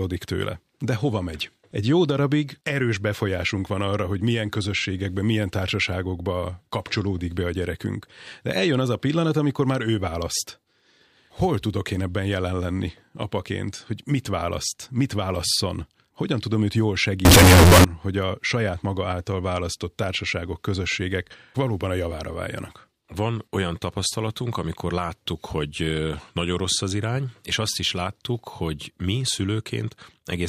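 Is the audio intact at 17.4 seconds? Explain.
No. From 17.25 to 17.84 s the waveform turns nearly square at an almost constant high level, loud and harsh, with background noise as loud as the speech, though pitch stays traceable. This is likely float read as integer: 32-bit float samples interpreted as 32-bit integers, so sign and exponent bits dominate the value.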